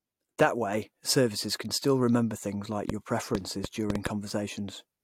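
From 2.90 to 4.08 s a train of clicks ticks and pops over the speech, about seven in all at roughly 4.3 per second, unevenly spaced and standing well above the speech. Similar repeated pulses like these are likely electrical interference or a faulty connection or power supply.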